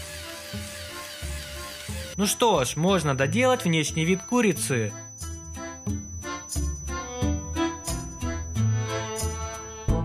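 A feedback whistle enters at 2.01 s and continues to the end of the clip: a thin, steady tone at 6 kHz sitting well below the main sound, slowly swelling and fading in level. The likely cause is a loudspeaker-to-microphone loop held right at the edge of feedback. Gain around that path is just high enough for one frequency to keep recirculating and sustaining itself, but not enough for it to build into a runaway howl.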